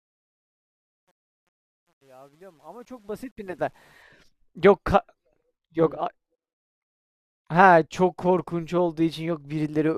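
Truncation distortion on a fade runs from 0.0 to 4.02 s in this speech clip, across the fade-in that reaches full level at 4.02 s. The gain stage drops low-order bits without dither, so near the bottom of the fade the waveform collapses into coarse square steps. This fits a resolution of about 10 bits. It is worst from 0.0 to 3.25 s, where the quiet start sounds gritty.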